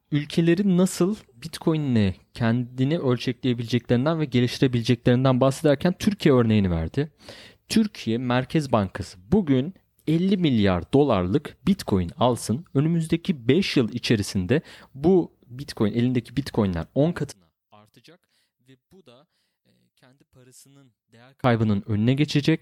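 From 17.32 to 21.44 s, one channel inverted is the likely cause: one stereo side flips polarity, so the shared centre content cancels when summed to mono. The speech collapses by about 32 dB into a faint residue before returning.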